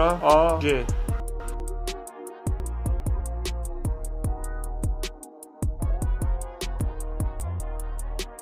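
Chunks out of order jumble the audio at 1.2–1.6 s, 2.6–3.2 s and 6.8–7.6 s. A 200 ms chunk plays one, two, then three chunks late, leaving hard joins.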